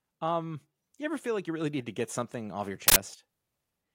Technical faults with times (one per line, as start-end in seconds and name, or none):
2.88-2.96 uninitialised buffer